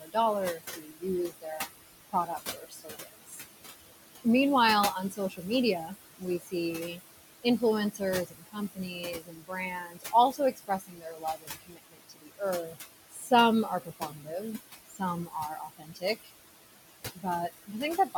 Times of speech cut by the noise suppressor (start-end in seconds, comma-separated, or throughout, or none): 0.00-3.41, 4.95-16.30, 17.14-18.16